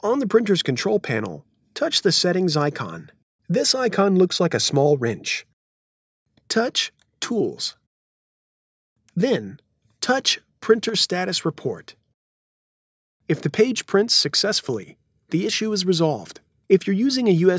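At 10.89 to 10.94 s and again at 14.83 to 14.88 s the level briefly dips by about 6 dB, most likely one channel dropping out for 50 ms.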